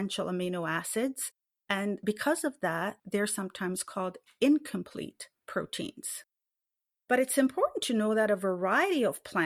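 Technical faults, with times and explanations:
No technical faults detected.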